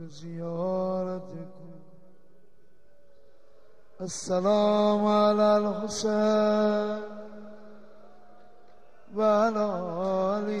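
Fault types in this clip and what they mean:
No technical faults can be heard anywhere in this audio.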